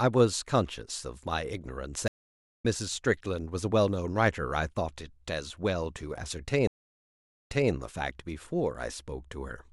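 Speech hit by two stream reconnects, where the connection dropped and a fresh decoder restarted mid-stream. The gap at 2.08–2.65 s skips about half a second ahead, and the gap at 6.67–7.71 s replays 0.24 s.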